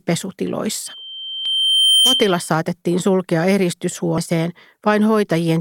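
At 0.86 s a loudspeaker feedback squeal starts: a pure tone near 3.1 kHz that swells over roughly one and a half seconds to sit a few decibels above the speech, then cuts off at 2.51 s, just before "saatettiin sulkea". The microphone was picking up the loudspeaker it fed, and at that frequency the loop gain went above one, so the tone kept reinforcing itself.

Inside the squeal, at 1.46 s, there is a brief blip caused by damaged data in the compressed stream. A second blip of the same kind comes at 4.18 s. Each lasts only a few milliseconds. At those points corrupted bytes in the encoded stream left the decoder with frames it could not read correctly. It lost sync and had to find the next valid frame header before normal playback continued.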